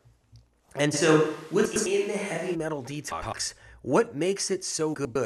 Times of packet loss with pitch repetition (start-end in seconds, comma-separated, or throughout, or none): none